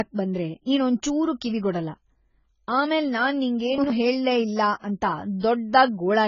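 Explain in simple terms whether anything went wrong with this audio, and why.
Yes, two things went wrong. Across the whole clip the speech sounds dull and muffled, with a smeared, warbly texture, and the highest sounds are gone because nothing above about 7 kHz is left. That is AAC compression damage, and it is heavy here. The likely cause is saving the file in a very small, low-quality format, which throws away fine detail and the highest sounds to save space.

The second problem is brief. Between 3.78 and 3.90 seconds, right after "ಆಮೇಲ್ ನಾನ್" and just before "ಹೇಳೇ ಇಲ್ಲ", the speech stumbles into a jumbled moment. This is chunks out of order: a slice of sound about 60 milliseconds long arrived one slice late and played after the slice that should have followed it. Nothing was lost, but the order was shuffled, leaving abrupt joins.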